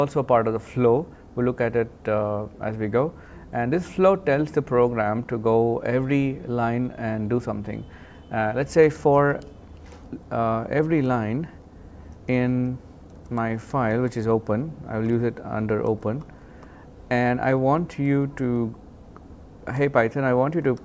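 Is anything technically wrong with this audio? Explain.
No, nothing technically wrong can be heard in this audio. No fault turns up anywhere across the clip.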